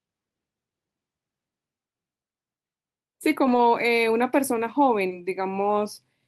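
At 3.43 to 3.57 s and 5.17 to 5.23 s, lost packets are rebuilt from error correction: low-bitrate backup copies fill about 80 ms and 40 ms, sounding rough and noisy with no gap, and appearing on a spectrogram as smeared, grainier patches.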